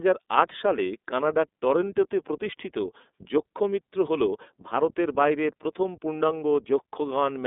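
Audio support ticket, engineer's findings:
Symptom: narrowband, slightly rough and synthetic speech across the whole clip. Codec damage plainly audible. Line band about 250 Hz to 3.6 kHz, nothing above 3.8 kHz. Probable component: iLBC codec. Each 30 ms frame coded independently, which fits the 13.33 kbps mode. Buzzy texture from that per-frame excitation coding.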